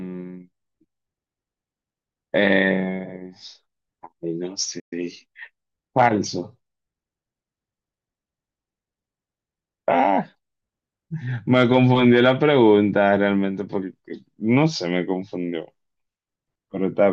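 At 4.79 s the speech cuts out mid-flow and stays silent for about 120 ms, resuming at 4.93 s. This playback stall most likely came from the player running short of buffered data, or from its output thread being blocked, leaving nothing to send until it recovered.

From 4.93 to 5.41 s the speech runs at 1.25 times normal speed while keeping its pitch. This is time-compressed catch-up: the player cuts short segments out of the backlog and cross-fades the joins to regain lost time.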